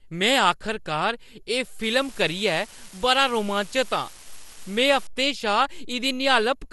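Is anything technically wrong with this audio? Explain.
Yes, two faults are audible.

Throughout the speech there is generation loss. The sound is swirly, smeared and hollow, consonant onsets are blurred, and nothing is present above 11.9 kHz. This likely comes from about seven lossy re-encodes, consistent with MP2 at 96 kbit/s. Each pass requantises on a shifted frame grid, so the noise and spectral gaps build up.

From 1.83 to 5.07 s an unreliable data bit adds a steady crackling fizz that continues through the pauses. One marginal data line flips its bit in a random fraction of samples, and each error produces a spike of the same height.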